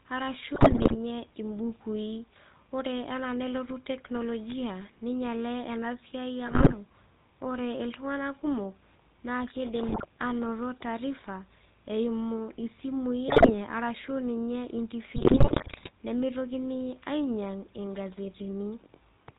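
A speech recording carrying the GSM full-rate codec throughout: the sound is buzzy and gravelly, with nothing above 4 kHz. That fits 13 kbps full-rate coding, where a pulse-driven excitation keeps only every third sample to feed a vocal-tract filter, and the damage is plainly audible. GSM bit errors break the sound into squawks, pops and gargling at 0.54–0.96 s, 6.46–6.74 s, 9.88–10.04 s (between "iltung'ana kumok naa keidim" and "ainoto taarifa eimu"), 13.28–13.52 s (just before "arashu ninye") and 15.16–15.91 s (just after "arashu ninye"). Corrupted filter, pitch and gain values distort the spectrum and level frame by frame, pointing to error rates of roughly 4–5 percent.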